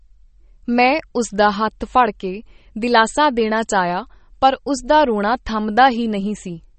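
From start to finish the speech is band-limited with nothing above 8.4 kHz, and sounds watery and swirly, likely MP3 compression at a low bitrate near 32 kbps.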